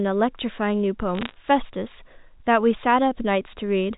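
From 1.15 to 1.34 s a brief spatter of sharp ticks and crackle rides over the unchanged speech, band-limited below 4 kHz by the G.711 telephone coding. These are bit errors on a digital phone line: flipped bits, around half a percent, each corrupting one sample, with hits on high bits producing a click.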